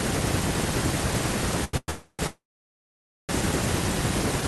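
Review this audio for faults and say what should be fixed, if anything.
A short stall from a late packet shows up at 1.64 to 1.74 s. The speech just before it gets held for 88 ms while the jitter buffer sits empty, then carries on from the same spot. Nothing is lost, just stretched with a slight buzz or dip.

Right after that come three call audio freezes, at 1.77 to 1.89 s, 1.90 to 2.20 s and 2.27 to 3.30 s. Each one trails off into a fading buzz or hiss. The last goes silent for 880 ms before resuming where it stopped, likely from packets held up in transit.

To fix both, steady the network path and give the jitter buffer more headroom so late packets arrive before it runs dry.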